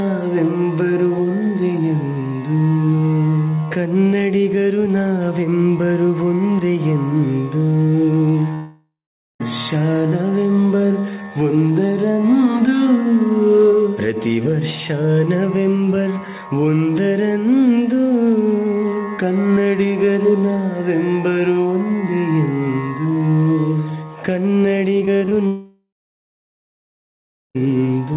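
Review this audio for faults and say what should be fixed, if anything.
From 8.54 to 9.42 s and 25.47 to 27.57 s, the sound fades to a dying buzz, then about 0.46 s and 1.65 s of silence: long network dropouts, likely lost packets, with audio resuming past the missing stretch.

From 25.00 to 25.33 s the audio turns choppy and robotic, with five short holes (longest 45 ms) patched by stretching the previous sound. This is repeated packet loss, with about a third of that span concealed, running straight into the second dropout.

Behind all of this, the G.711 mu-law call path keeps the sound band-limited, with nothing above 4 kHz. To prevent these faults, fix the unstable network link, for example by using a wired connection or prioritising the call traffic, and enable forward error correction or redundancy so short losses can be rebuilt rather than concealed.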